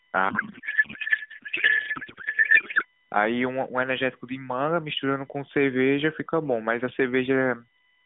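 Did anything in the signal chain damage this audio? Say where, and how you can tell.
Yes. In the analogue wiring, a USB whine sits under the speech throughout. It is a steady 1 kHz tone, loudest at 2 kHz, about 40 dB down, from bus current leaking into ground.

At the codec, a payload misread garbles the speech from 0.30 to 2.85 s into warbling noise. That fits octet-aligned AMR frames being decoded as bandwidth-efficient, shifting every field.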